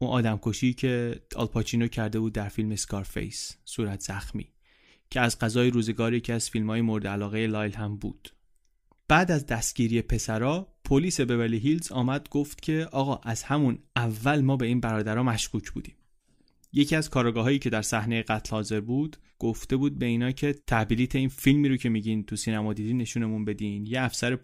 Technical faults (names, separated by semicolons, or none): none